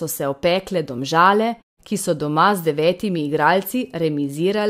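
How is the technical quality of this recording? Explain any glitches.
The technical quality of the recording is sound, with no glitches to explain.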